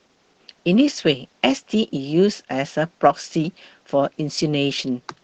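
The speech comes through with no technical faults, carried over a WebRTC call path whose codec holds the audio band to about 8 kHz, as expected for a call link of this kind.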